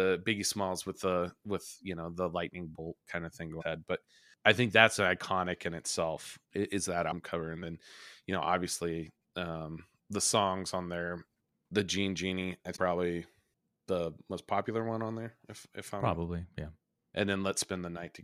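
At 3.60 to 3.62 s, right after "bolt kind of thing", the speech breaks into a brief glitch. It is damaged data in a compressed stream. Corrupted bytes leave the decoder unable to read those frames. It loses sync and hunts for the next valid frame header. The same blip returns at 7.11 s, just before "cover and then you". A third follows at 12.75 to 12.77 s. Each lasts only a few hundredths of a second.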